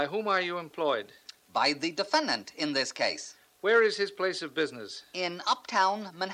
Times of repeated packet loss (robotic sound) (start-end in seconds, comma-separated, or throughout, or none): none